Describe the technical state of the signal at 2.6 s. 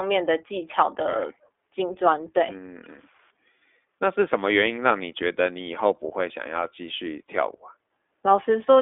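At 2.6 s the speech carries iLBC codec damage, present throughout the clip. Each 20 ms frame's excitation is coded independently, leaving a plainly rough, synthetic edge within a 300 Hz to 3.5 kHz telephone band, with nothing above 3.7 kHz, consistent with its 15.2 kbps mode. Plain band-limiting would stay smooth rather than rough.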